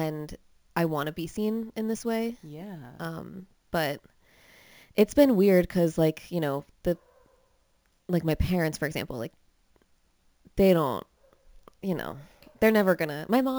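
Imaging from sample-and-hold upsampling runs throughout: a mirrored copy at 8 to 16 kHz, about 24 dB down, adds metallic fizz, fitting 16 kHz speech upsampled by repeated samples.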